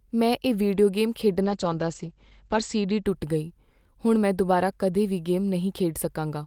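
From 1.43 s to 3.11 s the speech suffers a call bitrate drop. The connection's bandwidth estimate fell, and the encoder went from about 32 kbps to about 11 kbps, staying at the bottom for roughly 1.3 s. At that rate the codec quantises more coarsely and narrows the audio band from 20 kHz to 8 kHz. The voice turns muffled and rough and watery until the bitrate recovers just after 3.1 s.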